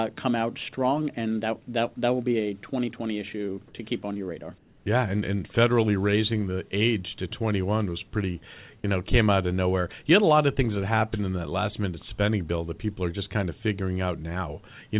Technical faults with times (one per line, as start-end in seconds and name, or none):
4.58-4.86 comfort noise in place of the background